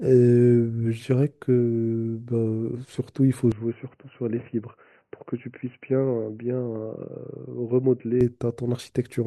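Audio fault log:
3.52–8.21 s: input switched to a poorer device, likely cause. Speech abruptly turns dull and boxy with nothing above 3 kHz, drops roughly 5 dB in level, and gains a faint new background noise well below the speech. At 8.21 s the full bandwidth returns. There is no gap at either switch. A plain low-pass filter or codec bandwidth drop would not also shift the level and noise floor, but here all three change together.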